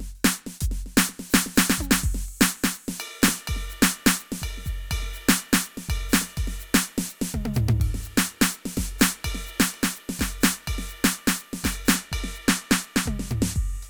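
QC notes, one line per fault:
11.96–13.89 s, channel delay (comb filtering): one channel of the music runs late by a tiny fraction of a millisecond, which fits a single-sample offset, and the two channels are summed to mono. Content shared by both channels cancels at evenly spaced notches, but with so short a delay the first notch sits up near 20 kHz. The result is less a hollow, phasey colour than a gentle roll-off that dulls the very top end through to the end.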